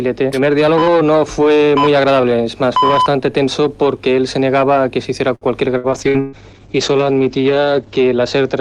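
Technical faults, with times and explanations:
5.35 to 6.36 s, repeated packet loss (robotic sound): four separate dropouts hit this one-second stretch, the longest about 124 ms. Each gap was first bridged by stretching out the previous sound, about 304 ms in all, and where that ran out, about 240 ms simply went missing, so roughly 30% of the span is concealed. It sounds choppy, with pieces missing. On a spectrogram, smeared, repeated harmonic bands alternate with short blank columns. The waveform shows abrupt level drops.
5.94 to 8.61 s, call bitrate drop: the encoder's budget fell from 48 kbps to 10 kbps and stayed at its lowest for about 2 s. At that rate the codec quantises far more coarsely and narrows the band from 20 kHz to 8 kHz, so the sound turns dull, rough and watery to the end. A spectrogram shows everything above 8 kHz cut off in a flat horizontal edge, with blotchy, grainy texture below it.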